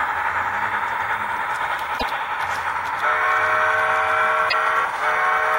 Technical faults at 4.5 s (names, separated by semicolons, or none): damaged data in a compressed stream